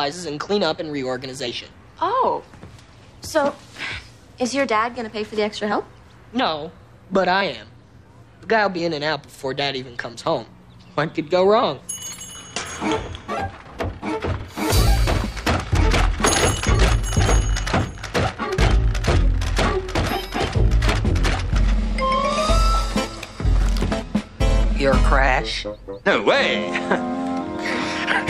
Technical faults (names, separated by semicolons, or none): overlapping chunks